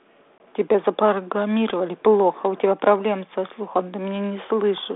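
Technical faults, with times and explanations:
0.38 to 0.41 s, packet loss on an ADPCM call: about one packet, some 20 ms, was lost and replaced with silence. The G.726 decoder's predictor and step size fell out of step, so after the hard-edged gap the speech returns with brief distortion.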